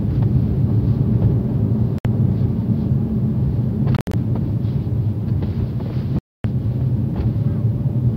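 Packets that likely missed the headphone link caused Bluetooth dropouts: silence from 1.98 to 2.05 s, broken gaps totalling 107 ms between 3.97 and 4.14 s, and 256 ms from 6.19 to 6.44 s. Each time, the sound resumes as if it had kept playing.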